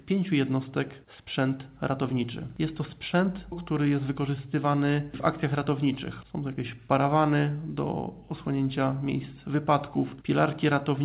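No technical faults can be heard in the clip. It arrives over a call path, and nothing reaches above 4 kHz, a narrow telephone-band sound that fits G.711 mu-law coding.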